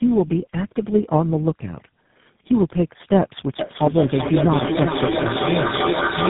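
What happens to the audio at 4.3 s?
Feedback echo between two devices runs from 3.59 s to the end of the clip. Two devices on the same call share a room, so one replays what the other's microphone sent. Each syllable returns roughly every 0.4 s, thinner and ringing, and the repeats peak about 3 dB above the direct sound, so they pile up.

Tandem speech coding affects the whole clip, including 4.3 s. The sound has been decoded and re-encoded across several speech codecs in a row, each working on the last one's damage. It sounds rough, muffled and warbly, with nothing above 3.8 kHz, which fits a chain like GSM, CVSD and G.729A.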